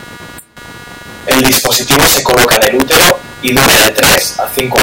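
A buzzing, chirping texture runs under the speech for the whole clip, pulsing at around 200 times a second and sitting roughly 25 dB below it. This is computer activity noise: changing processor or peripheral load shifts the shared ground the audio circuit relies on.

Throughout, the louder syllables break into harsh, violent cracks far sharper than ordinary clipping. This is integer overflow. The gain was pushed about 10 dB too high, so around one sample in twenty exceeded the integer limit and wrapped to the opposite extreme instead of being held.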